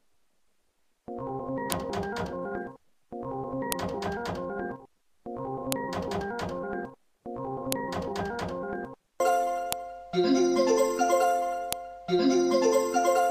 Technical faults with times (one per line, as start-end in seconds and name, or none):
1.72 file header played as audio
3.72 file header played as audio
5.72 file header played as audio
7.72 file header played as audio
9.72 file header played as audio
11.73 file header played as audio